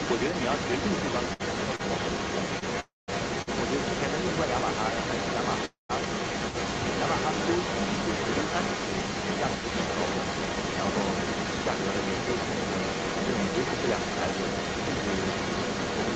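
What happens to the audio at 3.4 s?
At 3.42 s the sound freezes and is held for about 54 ms, to 3.49 s, with a slight buzz or dip before it picks up exactly where it left off. This is a short stall from a late packet: the jitter buffer ran dry, so the receiver stretched the last sound until the packet arrived. Nothing is lost, but playback now runs 54 ms later.

Under this, as throughout the clip, a second copy of the speech trails the original by about 0.31 s at roughly the same loudness. The likely cause is an echo leak, where a loudspeaker on the far end was picked up by its microphone and the echo canceller failed to remove it.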